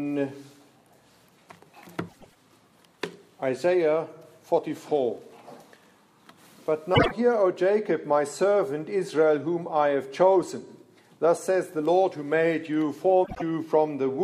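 Frames out of order at 2.08–2.37 s, 6.94–7.12 s and 13.24–13.42 s: adjacent blocks of 104 ms, then 52 ms twice, play swapped. Each gives a garbled flutter.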